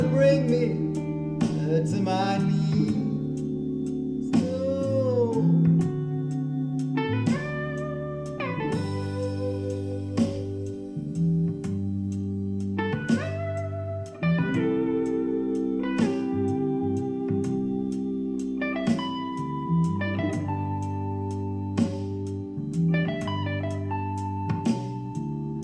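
On listening, nothing stood out as a technical fault at any point.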